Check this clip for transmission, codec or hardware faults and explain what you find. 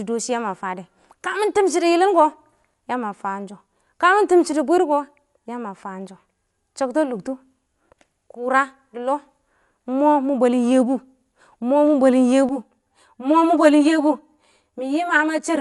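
Two faults are present: codec damage across the whole speech clip, and comb filtering near the end.

Dolby Digital compression, throughout: the audio is dull, with nothing above 11.4 kHz and a rough, fluttering noise around voiced tones. The likely cause is an AC-3 style encoder at a low rate, consistent with about 64 kbps, narrowing the band and replacing starved frequency lines with dither noise.

Channel delay (comb filtering), from 12.49 s to the end at 15.60 s: the sound turns hollow and phasey. One channel lags the other by roughly 10 ms before a mono sum, so shared content cancels at notches starting near 50 Hz and repeating about every 100 Hz.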